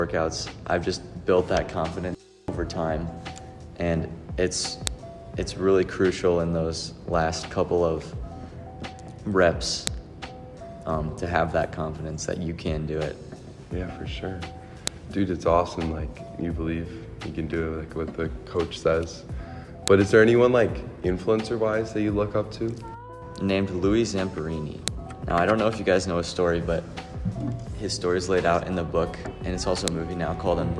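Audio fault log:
4.87, 9.87, 14.87, 19.88, 24.88 and 29.88 s: file header played as audio. A sharp, loud click recurs every 5 s where separate pieces meet. Each piece's header bytes were left in and replayed as samples, producing a snap that ignores the surrounding sound.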